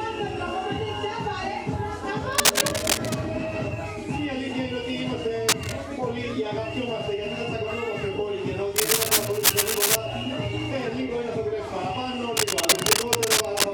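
Bursts of scratchy, crackling rustle sit over the audio from 2.32 to 3.17 s, 5.49 to 5.73 s, 8.76 to 9.96 s and 12.37 to 13.64 s, each a little louder than the sound beneath it. This is cable scratch noise, likely from a worn cable, connector or control being moved, so that its contact resistance jumps about and injects dense, irregular noise into the signal for as long as the movement lasts.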